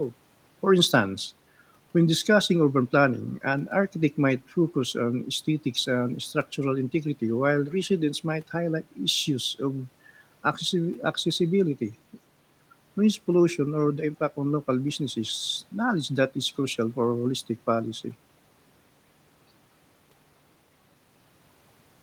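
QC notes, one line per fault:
No faults heard anywhere in the speech.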